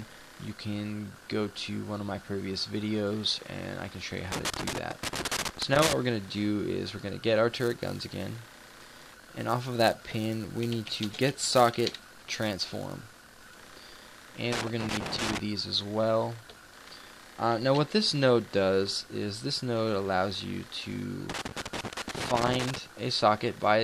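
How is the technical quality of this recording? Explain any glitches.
The recording has two kinds of fault: loose connector crackle in three places and a filter restarted on every block in one stretch.

Loose connector crackle appears from 4.32 to 5.93 s, 14.52 to 15.40 s, and 21.30 to 22.78 s. A worn or dirty contact is making and breaking as it moves. Each break chops the signal. Any DC on the line turns the jumps into pops. The result is an irregular burst of scratchy crackle over the sound.

The filter restarted on every block runs from 7.52 to 13.52 s. Here a filter loses its memory at each block boundary and starts again from silence. Every restart leaves a small transient. These repeat at a steady 345 Hz, which fits a 128-sample block. Together they form a buzz at that rate. It rises and falls with the level of the sound.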